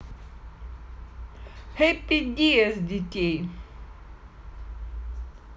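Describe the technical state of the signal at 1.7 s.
At 1.7 s the speech signal is intact, with no audible dropout, clipping, distortion or other fault at that moment.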